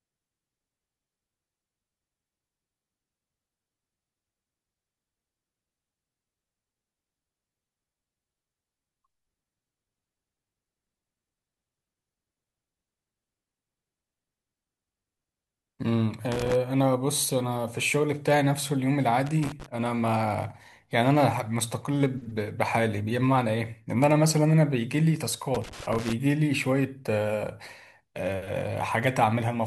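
Bursts of loose connector crackle break into the speech from 16.32 to 16.55 s, 19.26 to 19.66 s and 25.54 to 26.13 s, the last running over half a second. A worn or dirty contact is making and breaking as it shifts, chopping the signal into ragged scratchy fragments. Unlike evenly spaced digital clicks or a clean dropout, each burst is irregular and gritty, with no steady rhythm.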